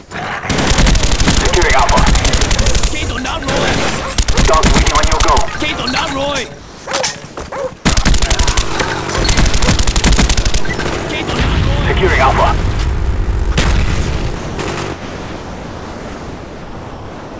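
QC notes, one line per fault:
0.00–0.11, 6.59–6.86, 7.28–7.37 s: comfort noise in place of the background. In these pauses the real background gives way to a steady, detail-free hiss, level-matched at first, then about 3 dB and about 2 dB quieter. This is likely discontinuous transmission, with the receiver synthesising noise. Only background is lost; nothing audible drops out.
13.52–13.55, 14.36–14.57, 14.93–17.39 s: sound dropped by the voice detector. Actual sound, not just background, is cut to steady noise. The cuts last 30 ms, 210 ms, then about 2.2 s running to the end. The likely cause is the sender's detector mistaking quiet sound for silence, unlike the harmless pause fill above.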